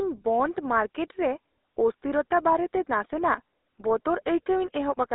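Speech heard throughout through the GSM full-rate codec, the original 2G mobile coder, at a rate that fits 13 kbps. Only a narrow 300 Hz to 3.7 kHz band survives, but what separates this from a plain telephone band-limit is the plainly audible buzzy, gravelly grain. The codec rebuilds the voice from a vocal-tract model fed by sparse, evenly spaced pulses, so even clean passages carry that rasp rather than simply sounding thin.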